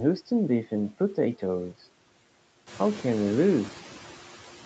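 From start to finish, a noise suppressor keeps estimating the steady background and cutting the bands it judges to be noise, by about 8 dB, frame by frame, producing noise suppressor artifacts. The noise drops away in the pauses and comes back up underneath the speech, so the floor pumps with the talking. Around two and a half seconds the room noise grows louder, yet stays well beneath the speech. Nothing reaches above 8 kHz.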